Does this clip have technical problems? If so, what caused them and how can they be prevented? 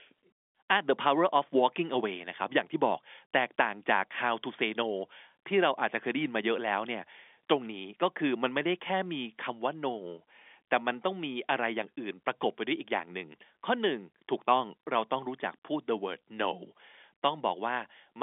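No, the speech arrives intact over what sounds like a standard G.711 telephone line, with its content confined to the 250 Hz to 3.5 kHz telephone band and nothing above 3.7 kHz, as that format requires.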